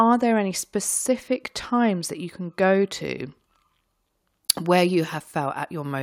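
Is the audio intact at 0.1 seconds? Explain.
Yes, the speech at 0.1 seconds plays through intact, with no dropout, click, distortion or other fault at that point.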